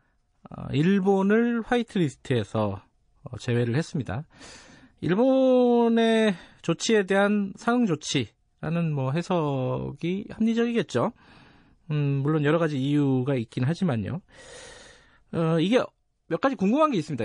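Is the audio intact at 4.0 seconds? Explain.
No, at 4.0 s the speech carries MP3 compression damage, present across the whole clip. It sounds watery and swirly, with chirpy s sounds, likely from the encoder starving bits and dropping weak frequency lines at something like 40 kbps.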